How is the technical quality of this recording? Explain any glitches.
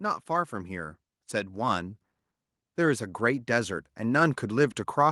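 The recording is marred by automatic gain rising in two stretches, from 0.05 to 2.02 s (about 4 dB) and from 2.75 s to the end. In each, the gain control judged the input too quiet and turned itself up step by step, so the speech and the background noise swell together. On a waveform the envelope widens steadily across each span; on a spectrogram the whole band, noise floor included, brightens gradually.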